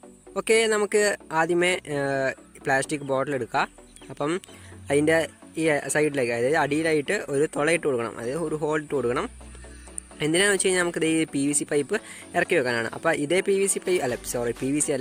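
No technical faults can be heard anywhere in this audio; the signal holds steady throughout, without any interruption, distortion or level problem.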